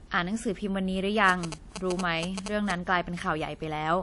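From the start of the speech to its end, the sound carries two layers of coding damage at once: the artefacts of two codecs heard together. This is likely transcoding between lossy codecs. A second encoder has spent its bits reproducing the first encoder's artefacts and added its own, which fits an MP3 stage followed by a WMA stage at around 48 kbit/s. On a spectrogram, nothing appears above 11.1 kHz, a hard ceiling inherited from the chain, and the upper bands break into blotchy, flickering patches.

From 1.29 to 2.72 s, GSM signalling bursts cut across the speech as a galloping dit-dit-dit of short buzzes, only a few decibels below the speech. A nearby 2G phone is transmitting grouped radio bursts while signalling, and the audio circuit rectifies them into a buzz pitched at 216.7 Hz. The waveform shows clusters of sharp, evenly spaced spikes riding on the speech. On a spectrogram they appear as vertical striping with a harmonic comb built on 217 Hz, stacked up through the spectrum.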